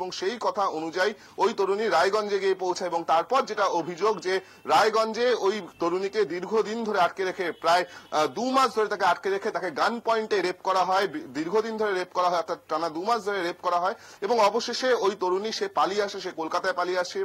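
Nothing in the audio stood out as a technical problem on listening.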